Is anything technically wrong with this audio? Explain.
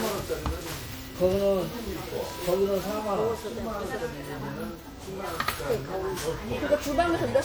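Yes. Throughout, the audio shows generation loss, likely from MP3 encoding repeated around ten times. Each pass quantises on a shifted frame grid, so swirling noise, spectral holes and blurred attacks pile up, sounding more hollow and smeared than one encode at roughly 96 kbit/s would.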